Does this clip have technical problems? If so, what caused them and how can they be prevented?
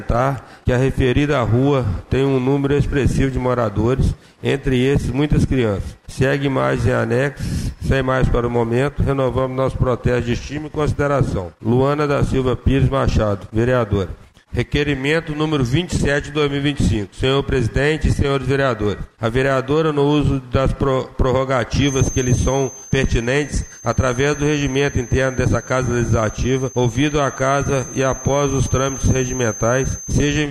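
Yes. A feedback whistle runs from 21.75 s to the end at 30.50 s: a thin, steady tone at 6.3 kHz sits behind the sound, some 15 dB below it, swelling and fading slowly in level. This is likely a loudspeaker-to-microphone loop poised at the edge of feedback, where the gain at that one frequency is just enough to keep it ringing without building into a howl. Lowering monitor gain, moving the microphone away from or behind the speakers, or notching 6.3 kHz would prevent it.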